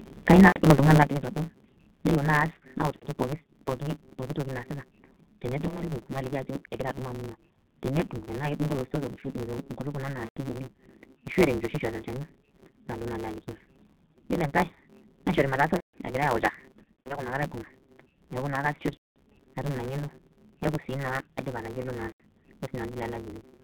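The whole recording has passed through the G.723.1 codec at about 6.3 kbit/s. The line band runs from 200 Hz to 3.7 kHz. Nothing above that survives. Codec damage is heavy. The speech sounds muffled and hoarse, and consonants are smeared.

A block size mismatch (truncated) also runs throughout. One stage writes longer blocks than the next stage reads, so each block loses its tail. A steady 138 Hz buzz results, which fits 512-sample blocks. Speech runs 1.6 times fast at near-normal pitch.

From 0.3 to 0.4 s the loudest syllable sounds harsh and crackly. Its peaks go about 1 dB past the limit, with a small share of samples flattened. Microphone overload is the likely cause, with the input volume set too high.

Just after that, at 0.40 s, the level drops by about 3 dB in one step. It drops again at 1.03 s by about 8 dB, and at 2.40 s by about 2 dB. Voice and background fall together. This points to the microphone volume being stepped down, likely by the call software.

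VoIP packet loss concealed by the speech codec follows. Gaps occur at 0.48 to 0.58 s, 2.96 to 3.06 s, 5.68 to 5.83 s, 10.25 to 10.38 s and 15.77 to 15.96 s. More follow at 16.83 to 17.22 s, 18.94 to 19.18 s and 22.09 to 22.21 s. The decoder repeats its last pitch and filter at falling gain. This produces a buzzy, fading tone. The missing audio runs from 60 ms up to 360 ms. At 16.83 s it is scattered over 420 ms, in runs of up to 90 ms. The voice stays weak for a moment after each gap.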